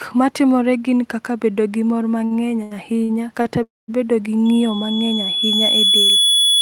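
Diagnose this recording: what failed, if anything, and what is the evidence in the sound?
Repeated stalls (stutter) at the network and jitter-buffer stage run from 2.25 to 3.47 s. The speech halts four times, with about 200 ms of filled-in sound in total and the longest hold about 81 ms, so nothing is lost but the speech drags. Packets were arriving late or too slowly, and the receiver kept extending the last sound to cover each gap. A spectrogram shows short horizontal smears where the harmonics freeze. The waveform shows brief repeated or fading stretches.

A call audio freeze follows from 3.63 to 3.90 s. The sound hangs for about 0.25 s, first as a continued, fading tail and then about 200 ms of silence, before the speech resumes where it stopped with nothing skipped. The timeline is pushed later by about 0.25 s. The likely cause is packets held up in the network until the jitter buffer ran dry. 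On a spectrogram this looks like a smeared band fading into a blank column. The waveform shows a decaying envelope and then a flat line.

Loudspeaker feedback squeal at the acoustic playback-to-microphone stage starts at 4.45 s and lasts to the end. A single 3.4 kHz tone swells over roughly two seconds until it sits about 5 dB above the speech. Loop gain at that frequency exceeded one, so the tone kept regenerating itself through the loudspeaker and microphone. On a spectrogram it is a bright horizontal line at 3.4 kHz that thickens over time. The waveform envelope grows steadily.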